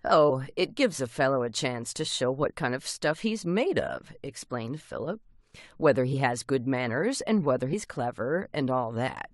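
At 7.72 s the decoder drops compressed frames, most likely a single frame it rejected as damaged or could not find. The speech jumps ahead by about 20 ms, consistent with a 23.2 ms frame, so a sliver of speech is briefly cut out at the join.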